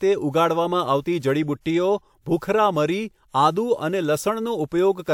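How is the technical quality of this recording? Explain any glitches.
The recording has one audible glitch. Pre-echo at 1.61 to 1.66 s: the transform codec spread quantisation noise across its block, so about 50 ms of hiss precedes a sharp speech attack and softens it.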